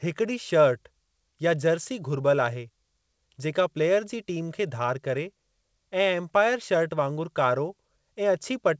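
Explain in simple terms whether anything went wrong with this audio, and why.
Nothing stood out on listening: the speech came over an ordinary internet call connection, which carries the sound up to about 8 kHz, and nothing went wrong along the way that I could hear.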